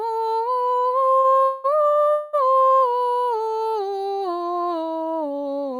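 A music clip with two network-delivery faults. From 1.17 to 1.66 s there are repeated stalls (stutter): the music halts five times, with about 267 ms of continued sound filling over half that span and the longest gap 188 ms, as late packets repeatedly emptied the jitter buffer. At 2.12 s a call audio freeze holds the last sound for about 211 ms, with no silence, before the music resumes at 2.35 s where it stopped. The likely cause is packets held up in transit, which inserted that delay.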